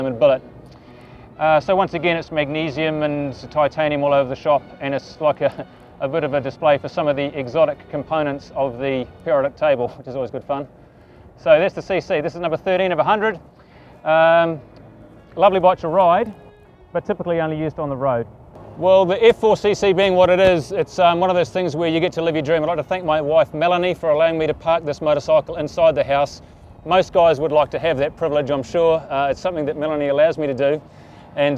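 No technical fault can be heard anywhere in the audio. There is nothing in it that calls for a time or a cause.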